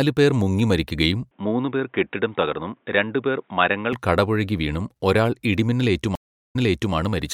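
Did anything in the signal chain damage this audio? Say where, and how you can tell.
Yes. From 1.31 to 3.93 s the speech turns dull and boxy, with nothing above 3.8 kHz, a level about 5 dB lower and faint new background noise. There is no gap at the change. At the device or driver stage, the input was likely switched to a poorer device with its own narrower band and noise.

At 6.15 s the audio drops into 366 ms of silence, then resumes about 0.42 s earlier, repeating material already heard, through 6.94 s. This is a stream reconnect at the network stage. The connection broke and a fresh decoder restarted from a resent burst.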